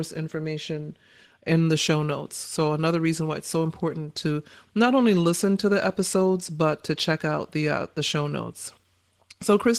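Opus voice compression runs through the whole speech clip, with plainly audible damage. The sound points to a low bitrate, around 16 kbps. The coder models the voice coarsely and adds a thin upper layer. Speech comes out hoarse and a little robotic.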